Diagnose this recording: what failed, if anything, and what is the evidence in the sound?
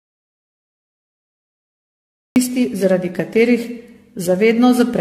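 The opening stretch, from the start of the clip to 2.36 s, is an audio dropout to silence, with no room tone. Speech resumes abruptly on "zaradi katerih". That points to lost input at the driver or buffer stage, likely a link or device failure, rather than a noise gate, which would leave residual hiss.

Throughout, the speech sounds swirly, hollow and smeared, with blurred consonant attacks and nothing above 14 kHz. This is generation loss in the codec stage, likely from around ten successive AAC-LC passes at 64 kbit/s. A single encode at that rate would sound cleaner, without this accumulated smearing.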